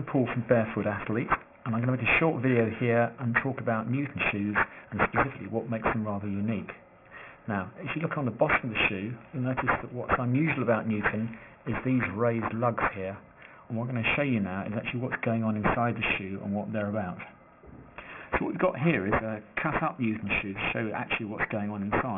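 Aliasing runs throughout: content above 3 kHz folds back as gritty, metallic false tones nearly as loud as the real sound, consistent with unfiltered downsampling to about 6 kHz; spectrograms show energy packed hard against the 3 kHz edge.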